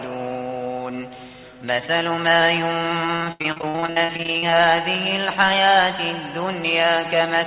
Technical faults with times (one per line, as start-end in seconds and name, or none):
3.06-4.55 repeated packet loss (robotic sound)
4.78-5.59 train of clicks